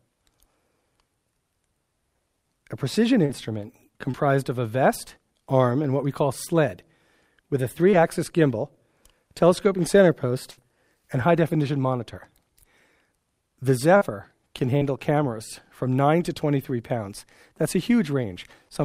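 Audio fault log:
3.25, 4.11, 7.91, 13.97 and 14.77 s: short concealed packet loss. Each is a brief smear or wobble where 20 to 40 ms never arrived and the decoder stretched the preceding sound across the hole.
10.51 to 10.59 s: burst of packet loss. A held, fading continuation of the last sound covers about 60 ms of lost audio, then playback jumps ahead past the missing part.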